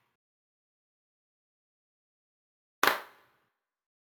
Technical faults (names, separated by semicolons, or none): imaging from sample-and-hold upsampling